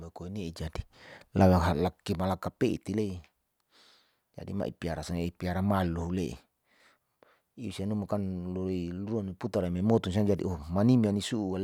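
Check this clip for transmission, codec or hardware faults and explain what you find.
Listening closely, there is nothing to report in this speech recording. No fault of any sort turns up anywhere in the audio.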